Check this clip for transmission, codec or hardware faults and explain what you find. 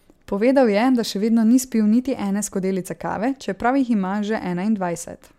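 Nothing heard in the speech points to a fault anywhere in the signal chain.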